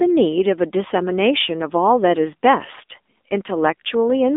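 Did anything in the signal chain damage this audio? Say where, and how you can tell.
Yes. Throughout, the speech sounds boxed-in and plainly buzzy, with nothing above 3.7 kHz and little below 250 Hz. This is the AMR narrowband mobile codec stage. Its pulse-driven vocal-tract model, at a rate that fits the 7.4 kbps mode, leaves synthetic-sounding damage.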